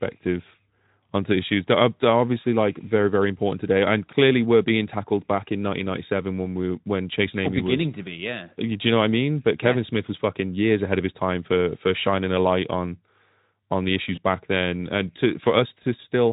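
At 14.15 to 14.18 s, between "on the" and "back then and", there is VoIP packet loss concealed by the speech codec. A gap of about 20 ms fits a single lost frame. The decoder filled it by repeating its last pitch and filter at falling gain. That brief stretch is smeared into a fading tone or noise. The next syllable returns weak, because each frame builds on the one before. The Speex coding around it adds only a light hoarseness.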